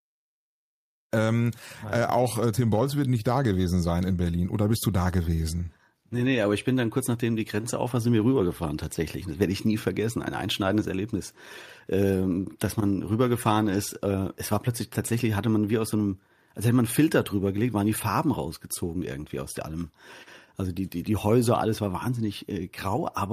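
Nothing technically wrong can be heard in this speech recording, which opens with a smooth fade-in from about 1 s that reaches full level by 1.14 s, with no click or hard edge.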